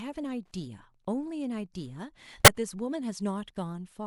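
Wi-Fi interference runs throughout: a nearby radio's beacon, rectified by the audio circuit, ticks faintly under the speech every 102.4 ms, roughly ten times a second.

A corrupt frame decoded at 2.45 to 2.48 s: a single damaged compressed frame was played anyway, its misread data producing a loud, brief burst of misplaced energy.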